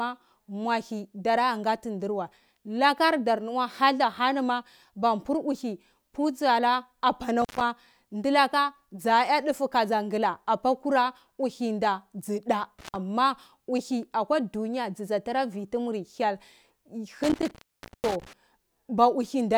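A speech recording with intermittent contact: the signal drops out three times, at 7.42 to 7.61 s (open for about 123 ms), 12.79 to 12.96 s (about 134 ms), and 17.23 to 18.33 s (about 492 ms). Each break points to a loose plug or cable opening briefly, cutting the sound with crackle at both edges and leaving faint hiss. On a spectrogram these show as thin vertical broadband streaks bracketing dark, near-empty gaps. The waveform collapses to a near-flat line between spiky edges.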